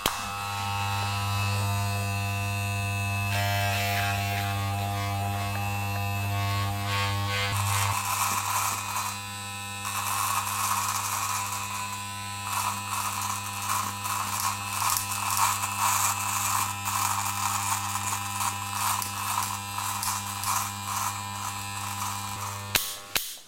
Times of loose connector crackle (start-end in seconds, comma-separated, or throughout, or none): none